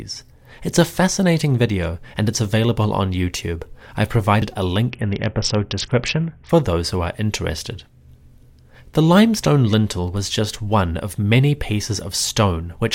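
At 4.42 s the speech jumps forward as an abrupt splice: a short piece, roughly 50 ms, is simply gone. This is audio missing between chunks, likely from a recorder switching blocks. The waveform shows a sudden step with no silent gap.

From 4.90 to 6.49 s, just before "those who are interested", a Bluetooth SBC bit pool drop dulls the treble and adds a gritty hiss. The sound points to the bit pool falling from 31 to 6, near 55 kbps. A spectrogram shows the upper band emptied and speckled noise below.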